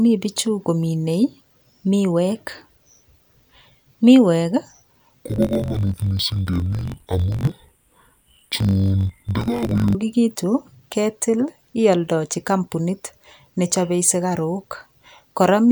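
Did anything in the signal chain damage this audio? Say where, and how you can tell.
Yes. Between 5.25 and 9.97 s the speech drops a full octave, sounds doubled, and turns choppy, with a flutter repeating at 46.9 Hz, once every 21.33 ms. That points to interleaved audio read as planar, at the sample-format conversion or buffer stage. Each block of alternating left and right samples was split in half, and each half was played at half speed. The 21.33 ms period fits a 1024-sample block.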